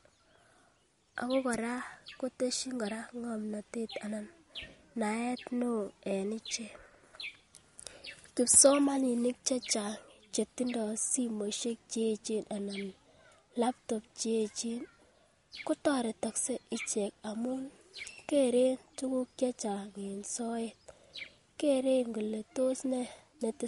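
Throughout the speech there is a watery, swirling texture, with metallic chirps on s sounds and softened attacks, and nothing is heard above about 11.2 kHz. This is likely MP3 compression at a low bitrate, around 48 kbps, where the encoder cuts the treble and lets weak frequency components flicker between frames.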